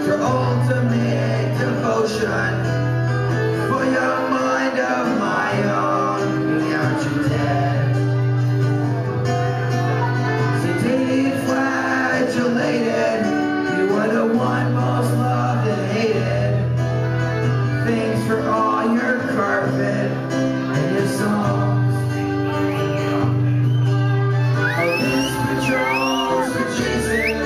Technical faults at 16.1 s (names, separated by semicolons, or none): none